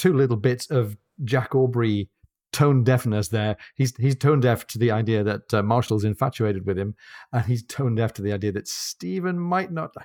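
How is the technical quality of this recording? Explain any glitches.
One glitch stands out: a brief jumbled moment at 5.86 to 5.90 s, between "the idea that uh" and "infatuated with him and". These are chunks out of order. A 20 ms block of audio played one chunk late, so two pieces swapped places, leaving hard joins.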